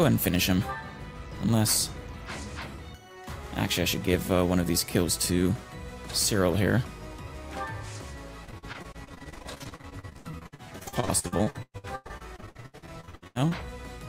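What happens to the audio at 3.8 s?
Nothing goes wrong at 3.8 s: the audio carries on intact through that moment, with no dropout, click, distortion or other audible fault.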